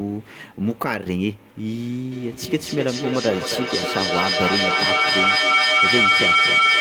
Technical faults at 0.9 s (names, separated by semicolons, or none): none